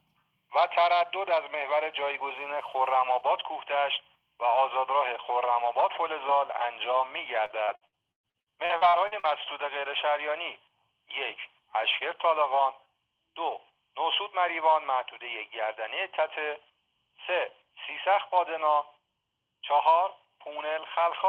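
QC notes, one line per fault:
7.45–9.25 s, repeated packet loss (robotic sound): about a dozen holes in under two seconds, the longest around 115 ms, with roughly a third of the stretch patched by stretching the previous sound forward, which gives the choppy sound with pieces missing. Unlike a single dropout or a codec glitch, the gaps recur in quick succession and the fill repeats what came before rather than going silent, over a call path band-limited near 12 kHz.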